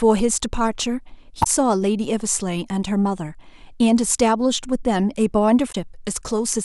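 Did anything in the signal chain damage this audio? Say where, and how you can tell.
Yes. Two short disturbances, each about 70 ms, break into the speech at 1.40 to 1.47 s and 5.68 to 5.75 s. That is damaged data in the compressed stream: corrupted bytes make the decoder misread frames and lose sync until it finds the next valid header.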